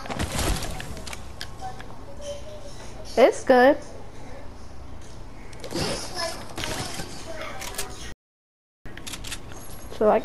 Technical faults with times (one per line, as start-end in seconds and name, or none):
8.12-8.86 audio dropout to silence